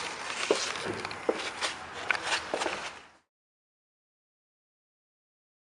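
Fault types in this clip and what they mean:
No technical faults can be heard in the signal; the only change in level is a deliberate, gradual fade-out that begins around 2.5 s and finishes at 3.31 s without any click or abrupt edge.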